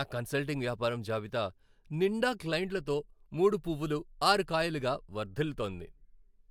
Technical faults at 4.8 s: none

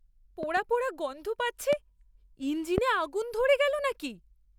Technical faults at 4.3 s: none

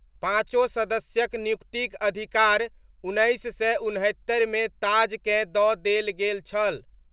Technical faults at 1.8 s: clock drift between sender and receiver; repeated timing corrections

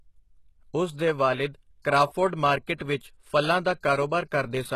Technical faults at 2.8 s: HE-AAC compression; pre-echo

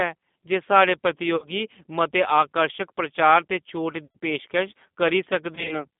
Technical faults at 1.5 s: G.729 codec; VoIP packet loss concealed by the speech codec

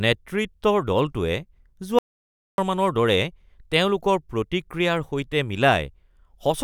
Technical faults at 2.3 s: audio dropout to silence

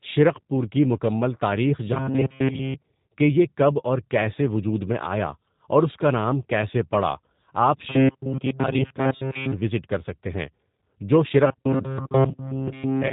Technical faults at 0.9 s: G.729 codec

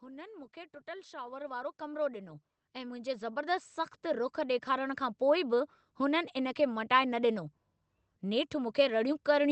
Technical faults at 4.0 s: automatic gain rising

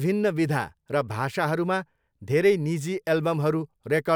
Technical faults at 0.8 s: none

